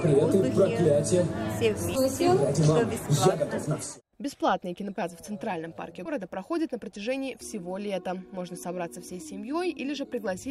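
Whole compressed frames were skipped three times, either missing from the stream or rejected by the decoder as damaged, so the audio jumps forward in steps of its 20 ms frame length. At 1.95–1.98 s roughly a tenth of a second vanishes, and at 4.95 s and 6.05–6.10 s about 150 ms each.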